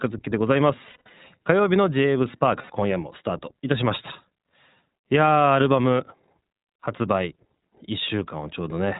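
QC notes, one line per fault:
Throughout: iLBC codec, speech band-limited below 4 kHz, plainly rough and synthetic; bit rate and framing point to 15.2 kbps mode with 20 ms frames.
0.90–1.10 s: lost iLBC frames, about 160 ms missing across 200 ms, longest run roughly 70 ms; decoder repeats last pitch cycle with noise, giving buzzy held vowels.
2.62–2.70 s: lost iLBC frames, one 80 ms gap concealed by a repeated, noisy pitch cycle, heard as a brief sustained buzz before speech recovers immediately.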